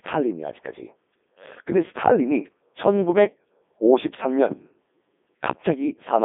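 From the start, the speech carries the signature of the Codec 2 vocoder. Pitch, voicing, energy and a coarse spectral envelope are sent in place of the waveform, and the decoder rebuilds the voice from sine waves. The result is heavily damaged, robotic and buzzy. The band is confined to roughly 200 Hz to 3.6 kHz, with nothing above 3.8 kHz, which fits Codec 2 running at its top rate of 3.2 kbit/s.

At 4.52 to 4.60 s a phantom power thump breaks in: a deep, low-frequency knock caused by a supply being switched on a live input, its voltage step passing through the coupling capacitors. It is short and dies away quickly, decaying in about 17 ms, so it registers as a dull thud rather than a lingering boom.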